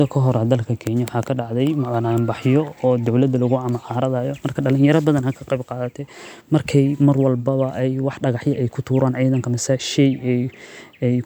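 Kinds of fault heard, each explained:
No technical fault can be heard anywhere in this speech recording. Nothing in it calls for a fault line.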